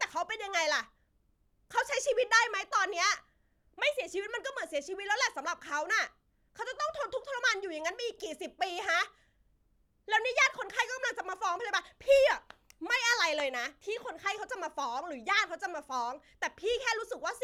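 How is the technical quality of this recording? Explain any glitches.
No technical faults are audible in the recording; there are no glitches to explain.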